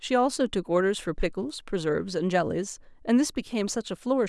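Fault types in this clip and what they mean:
Nothing here to flag, since no faults turn up anywhere in this bit of speech.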